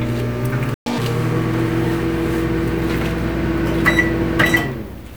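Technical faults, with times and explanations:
0.74–0.86 s, playback stall: the sound cuts out in mid-flow and goes silent for 120 ms before resuming. The likely cause is the player running out of buffered data or its output thread being blocked, leaving nothing to send until it recovered.
0.86–0.98 s, catch-up at higher speed: for 120 ms after the gap the sound runs at twice normal speed, raised in pitch by roughly ten semitones. The player is resampling its backlog to win back the lost time, then it returns to normal speed and pitch.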